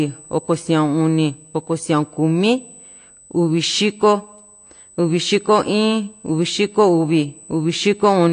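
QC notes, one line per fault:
throughout: USB whine, a fixed 8 kHz tone about 25 dB below the speech, matching 125-microsecond USB microframe current leaking in through power or ground.
throughout: AAC compression, likely the cause of plainly audible coding damage: dull speech with nothing above 9.8 kHz, consistent with AAC-LC at a low bitrate around 32 kbps.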